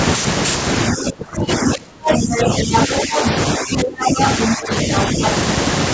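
From 0.92 to 3.23 s the talker's speech sinks and breaks up in pieces, falling by as much as about 25 dB and losing around one and a half seconds in total. This is speech suppressed in double talk, likely caused by the echo canceller clamping down on both voices while the far end was talking. Unlike a network dropout, the gaps come while the far end is talking.

That second voice is the other side's voice leaking through, first as a short scrap at 1.51 to 1.72 s and then steadily from 2.06 to 3.3 s. It sits at about the same level as the talker, likely because the canceller left loudspeaker echo in the microphone signal. It is a distinct second talker. Room reverb, by contrast, would only smear the talker's own speech.

The pattern repeats with shrinking depth. Suppression from 3.58 to 4.18 s, at about 20 dB for roughly half a second, overlaps leakage from 4.04 to 4.46 s. Suppression from 4.55 to 5.22 s, at about 10 dB for a few hundred milliseconds, overlaps leakage from 4.95 to 5.3 s, which sits a little below the talker.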